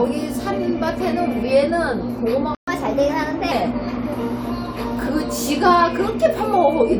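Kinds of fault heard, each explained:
Playback stall: At 2.55 s the sound cuts to silence for about 126 ms, then resumes where it stopped. The likely cause is the player running dry or being blocked. Unlike a dropout that skips material, nothing is lost here; the flow simply pauses.
Catch-up at higher speed: Right after the gap, from 2.68 to 3.52 s, the audio runs 1.15 times fast, pitch raised by about two semitones, to win back the lost time before settling to normal. Pitch and tempo rise together, unlike a time-stretch.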